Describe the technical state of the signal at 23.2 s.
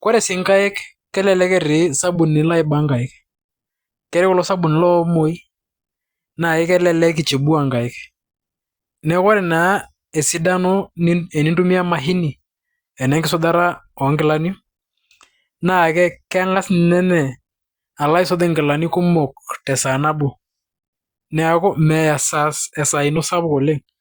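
At 23.16 s, compressed frames are skipped. About two frames, roughly 20 ms of speech, never reach playback, which fits 10 ms frames, so the audio jumps ahead. The waveform shows a discontinuity, and the spectrogram a brief vertical line.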